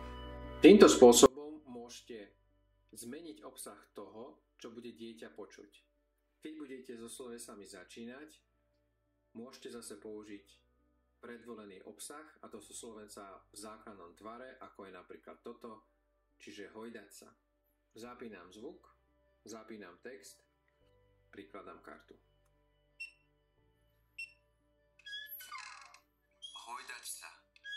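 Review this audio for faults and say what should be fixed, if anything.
From 1.26 s to 27.76 s, the mono sum drops by about 29 dB, leaving only a faint residue of whatever differs between the channels. The likely cause is one channel inverted: with one side's polarity flipped, everything common to both cancels when they are combined. To prevent it, check polarity with a correlation meter or a mono fold-down before export, and flip the offending channel back.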